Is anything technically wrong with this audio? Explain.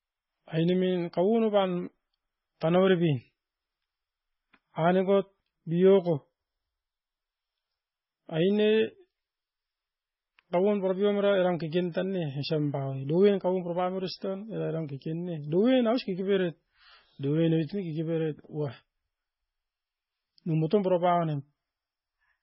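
Yes. Throughout the speech, the audio has likely passed through heavy MP3 compression, and the damage points to a very low bitrate, consistent with roughly 16 kbps. Starved of bits, the encoder has cut everything above 5.6 kHz and dropped the weaker frequency lines, which flicker in and out between frames. The speech sounds dull and muffled, with a watery, swirling texture, metallic chirping on s sounds, and smeared consonant onsets.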